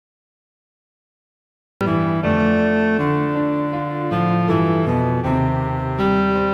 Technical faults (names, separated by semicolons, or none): cut-off start